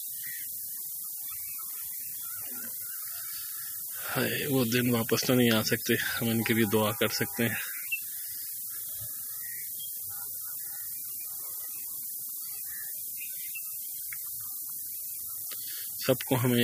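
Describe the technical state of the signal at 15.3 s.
The signal carries low bit depth with noise shaping for the whole clip, including 15.3 s. With only 5 bits, the rounding error is fed back and pushed upward in frequency, leaving a steady, thin hiss climbing toward the top of the band, nearly as loud as the sound itself.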